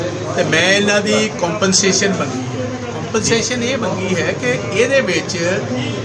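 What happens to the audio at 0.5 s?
Nothing goes wrong at 0.5 s; the audio there plays through intact, with no dropout, click or distortion.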